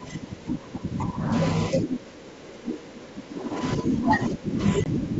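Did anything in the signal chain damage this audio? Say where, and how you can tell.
Yes. In call processing, the echo canceller likely mistook double talk for loudspeaker echo and turned the near-end speech down with it. From 0.0 to 1.32 s the speech sinks by about 15 dB, and from 1.70 s to the end it drops by about 20 dB, thinning and breaking up.

On the network, a 20 ms hole at 4.84–4.86 s, consistent with a couple of lost packets, was filled with silence. The gap has hard edges. Afterwards the ADPCM decoder's predictor and step size are out of step with the sender's, so the sound resumes disturbed until they realign.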